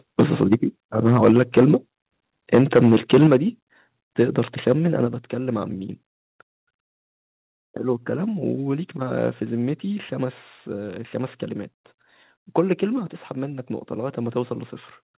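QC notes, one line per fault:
0.19–0.55 s, 2.53–3.36 s and 4.67–4.73 s, microphone overload: the loudest syllables turn harsh and crackly, worst in the 2.53–3.36 s stretch. The peaks likely drove the microphone input past the converter's limit, by about 6 dB, 10 dB and 2 dB respectively. Their tops are flattened, with a few percent of the audio clipped in each burst, and the 2.53–3.36 s burst is the most heavily clipped.
0.54 s, 3.27 s, 5.07 s and 12.99 s, microphone volume stepped down: the level drops abruptly by about 2 dB, 6 dB, 4 dB and 3 dB. The background falls along with the sound. The first two steps land at the end of the distorted bursts, which points to the call software likely reacting to the overload by cutting the device's input volume in single steps.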